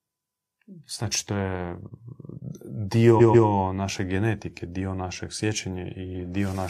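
Repeated frames at 3.16 to 3.44 s: a 139.3 ms block of the compressed speech, which fits a run of about three frames, is decoded two extra times. It stutters just before "naše genetike dio našeg" and lengthens the audio by 278.6 ms.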